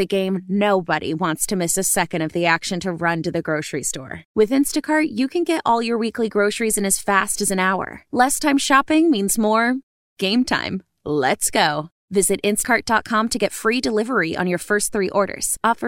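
At 12.63 s the speech jumps ahead by about a tenth of a second. These are compressed frames skipped: several whole 23.2 ms frames never played. The spectrogram shows formant tracks breaking and resuming offset.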